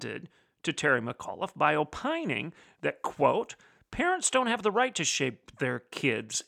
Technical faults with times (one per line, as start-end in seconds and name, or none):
none